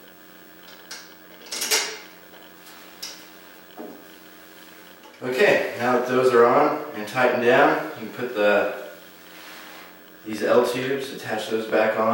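From 10.33 to 12.01 s a train of clicks ticks over the sound, about twenty similar pulses at some 13.2 per second, unevenly spaced and slightly louder than the audio, likely from interference or a faulty connection. Unlike a single glitch, they repeat with much the same shape.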